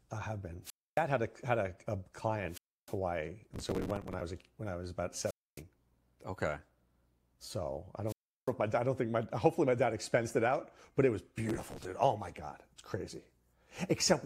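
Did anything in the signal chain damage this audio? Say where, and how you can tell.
Yes. Wireless microphone squelch dropout at 0.63–1.02 s (after "I have been"), 2.48–2.97 s, 5.24–5.62 s and 8.06–8.52 s: the analogue radio link fades, hiss rises, then squelch mutes 0.27–0.35 s.

Processor overload crackle at 3.54–4.21 s (before "was a when I") and 11.49–11.85 s: in the driver buffer stage, missed deadlines replay stale audio in repeated hard-edged fragments. This is heard as gritty tearing.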